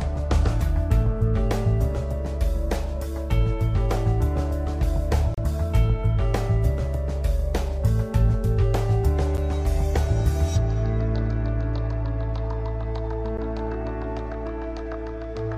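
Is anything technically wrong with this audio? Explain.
Yes. There are three gaps between stream segments: at 5.34–5.38 s (about 33 ms), at 9.37 s (about 9 ms) and at 13.37 s (about 10 ms). Each falls on a boundary between 2-second segments, where the timestamps leave a short interval that no segment covers. The player fills that interval with silence. You hear an abrupt, hard-edged dropout in the sound, followed by an immediate resumption. Nothing is missing from the audio, only delayed by the inserted gap.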